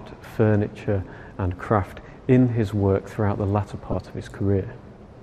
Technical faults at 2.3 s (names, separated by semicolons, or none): none